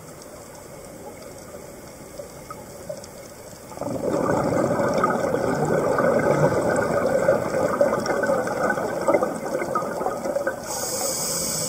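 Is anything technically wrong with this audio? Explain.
No, nothing technically wrong can be heard in this audio. The sound carries on evenly throughout, with nothing that points to a problem in how it was captured or delivered.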